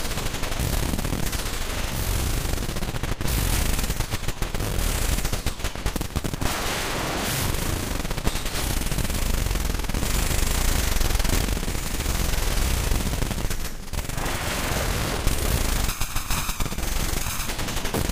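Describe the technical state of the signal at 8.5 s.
At 8.5 s the audio is intact, with no dropout, clipping, distortion or other fault.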